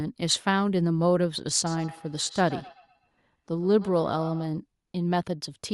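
From 1.66 s to 4.53 s, a second device replays this audio and the microphone recaptures it, a feedback echo between two devices that no echo canceller removes. Speech returns roughly every tenth of a second, thin and ringing, about 17 dB down.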